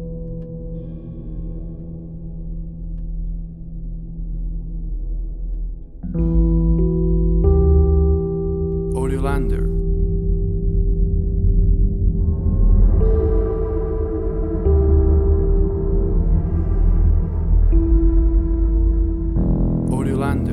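No technical faults can be heard anywhere in this audio; the signal holds steady and continuous throughout, with nothing that breaks, distorts or disturbs it.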